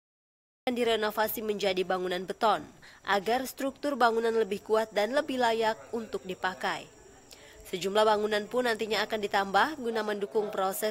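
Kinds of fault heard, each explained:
Cut-off start: Capture began late. Digital silence runs to 0.67 s, then sound enters abruptly mid-event, with no natural attack or fade-in.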